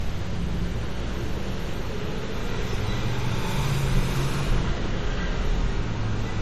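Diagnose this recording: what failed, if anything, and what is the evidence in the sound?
Codec stage: likely transcoding between lossy codecs. An MP3-style encode was re-encoded as Vorbis, stacking both codecs' artefacts throughout, with nothing above 14.2 kHz.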